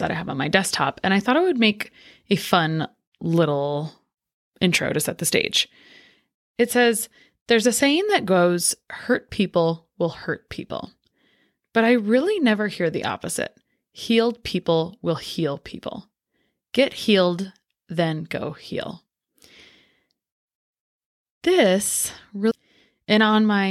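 At 22.50 s a stream segment skipped: speech jumps ahead with a blip, likely a failed segment load, seen as a sharp waveform break.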